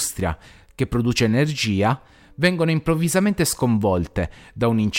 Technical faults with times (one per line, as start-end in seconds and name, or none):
none